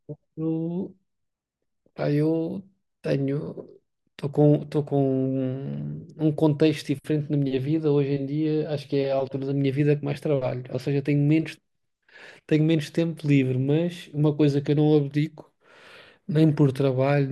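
No technical faults can be heard in this speech.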